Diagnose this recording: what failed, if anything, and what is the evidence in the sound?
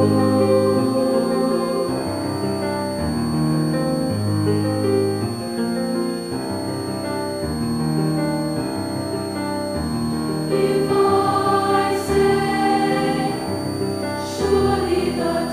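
A switching supply whistle sits under the whole recording, so the failure is in the analogue stage, on the power feeding it. A thin high tone wanders between about 4.3 and 4.6 kHz, roughly 20 dB below the programme. A nearby switch-mode supply is running in an audible burst mode or beating with another supply, and its frequency moves as the load shifts. On a spectrogram this appears as a narrow, slightly meandering horizontal line spanning the clip.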